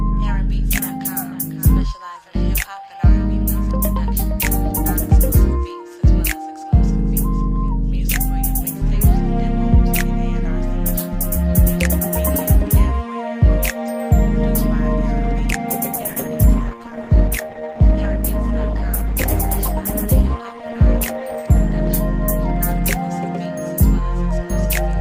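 An adaptive stream at a lower bitrate takes over from 15.92 to 21.92 s, when the connection evidently slowed and the player switched down. Quality drops abruptly with no gap: artefacts thicken, consistent with Opus falling from about 64 to 16 kbit/s.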